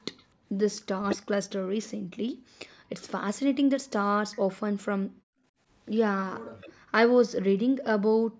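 At 0.17 to 0.23 s there is an echo leak, likely from a far end playing the call on a loudspeaker whose echo canceller failed to fully remove what its microphone picked up. A faint copy of the voice returns about 248 ms late, about 35 dB below the speech, a brief scrap trailing the original.

From 0.29 to 0.48 s, the first instance of background gated by the echo canceller appears. While the loudspeaker was active, the canceller clamped the microphone, so the room tone sinks by about 27 dB for a moment and then recovers. The same gating returns at 1.98 to 2.52 s, 5.07 to 5.44 s, 6.4 to 6.92 s, and 8.27 to 8.39 s, with drops of about 40, 36, 40 and 35 dB. Each one is heard as a hole in the ambience lasting roughly 100 to 400 milliseconds.

At 0.97 to 1.19 s and 3.96 to 4.12 s there is speech suppressed in double talk. Both sides likely spoke at once, and the canceller could not tell the local talker from the loudspeaker echo, so it turned everything down. 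The voice dips sharply, by roughly 30 dB and then by around 40 dB, for a fifth of a second or less.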